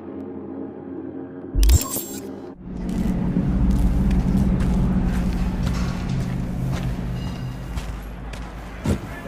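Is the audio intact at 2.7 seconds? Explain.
No. At 2.7 s the audio sits inside a run of clock drift buffer slips from 0.21 to 8.68 s: a regular click every 0.77 s, likely from two clocks disagreeing by about 200 ppm, so a few samples get dropped or repeated each time. A waveform shows small periodic discontinuities, and a spectrogram shows evenly spaced thin vertical broadband lines.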